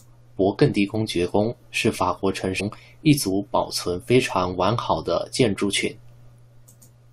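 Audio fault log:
2.59 to 2.61 s, damaged data in a compressed stream: a short burst of corruption breaks into the speech for about 20 ms. It sounds like a brief digital blip. Some bytes in the compressed stream were lost or overwritten. The decoder could not read the frames there correctly. It lost sync and had to hunt for the next valid frame header. The garbled output during that search is the blip.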